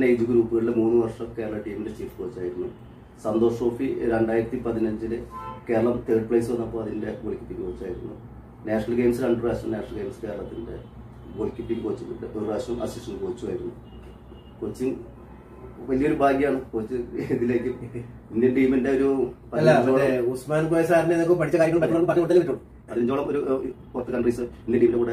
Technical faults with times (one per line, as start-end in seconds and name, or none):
21.43-25.12 time-stretched section